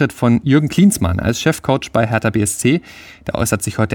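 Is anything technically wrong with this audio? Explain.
No, nothing in this speech recording points to a technical fault.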